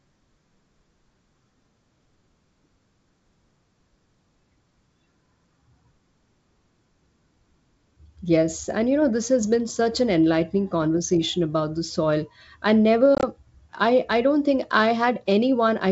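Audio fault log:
13.15–13.27 s, packet loss on an ADPCM call: after "about the soil I", 60 ms of hard-edged silent gaps, each up to 20 ms, scattered over 80 ms. The decoder's adaptive predictor and step size lose sync with the sender, so the sound resumes briefly mistracked before "I I don't think".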